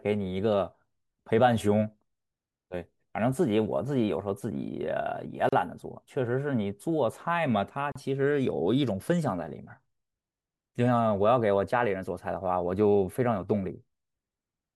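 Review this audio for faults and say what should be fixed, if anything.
Gaps at joins of encoded pieces occur at 5.49 s (36 ms) and 7.92 s (35 ms). The speech was encoded in separate pieces, and each piece's encoder delay and padded final frame were left in. Unlike a dropout, nothing is lost: the speech resumes exactly where it stopped. Prevent this by trimming encoder delay and padding before joining, or by encoding the whole clip in one pass.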